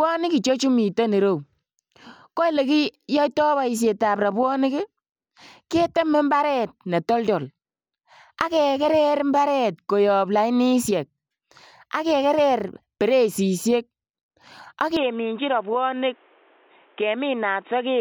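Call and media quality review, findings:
Speech turns dull and boxy from 14.97 s to end, no gap at the switch. Input switched to a poorer device, likely a headset call profile or second mic. Spectrogram: hard ceiling at 3.8 kHz from 14.97 s, new noise floor about 35 dB under speech. Waveform: envelope steps down about 5 dB.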